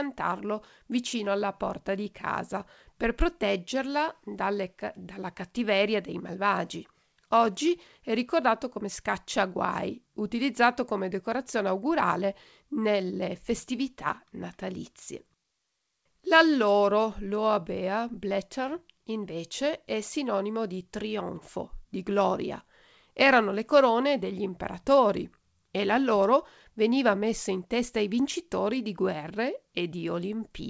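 Nothing here goes wrong at any point, and the speech simply comes over as it would on an ordinary call, with the top end stopping at about 8 kHz in a way that fits a wideband call codec like G.722.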